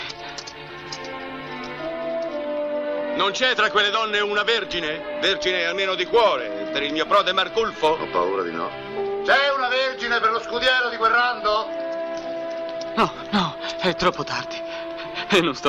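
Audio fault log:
No technical faults can be heard anywhere in this audio; the signal stays intact and steady throughout.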